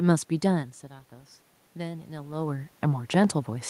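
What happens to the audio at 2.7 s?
At 2.7 s the automatic gain rising is still under way. It runs from 0.5 to 2.79 s. The input level fell by about 14 dB, as if the talker moved back from the microphone around 0.5 s. The gain control judged the signal too quiet. It then lifted its gain slowly, by about 4 dB. The voice and the room noise swell together. The rise ends just after 2.7 s.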